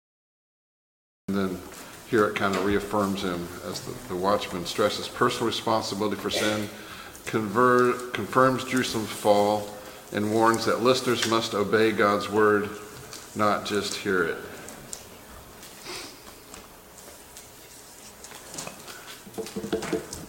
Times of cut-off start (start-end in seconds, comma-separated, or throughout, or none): 0.00-1.28